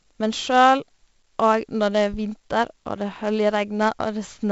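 From start to end the speech carries 4-bit ADPCM compression, heavily damaged. Coarse predicted steps leave a gritty hiss that rises and falls with loudness, unlike a steady noise floor, and nothing reaches above 7.7 kHz, which fits 64 kbps at a 16 kHz rate.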